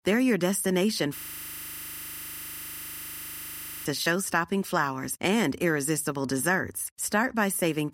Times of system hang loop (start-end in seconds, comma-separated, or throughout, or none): 1.17-3.86